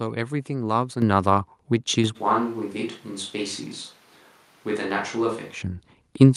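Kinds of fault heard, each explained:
Microphone volume stepped up: The input gain on the mic gets bumped in a single jump, as if the call software decided the signal was too quiet, so the voice and whatever's behind it get louder together. You hear it twice, at 1.02 s with a jump of about 8 dB and again at 2.04 s with about 5 dB more. Both land abruptly rather than fading in, which is the giveaway.
Switch to a distant microphone: From 2.17 s to 5.60 s the voice suddenly goes hollow and roomy, thinner in the low end, and drops roughly 10 dB in level. The room's background comes up to sit only about 30 dB under the speech. Both the change in and the change back are instant. That points to the recording likely falling back from the close mic to one further away, such as a camera's built-in one.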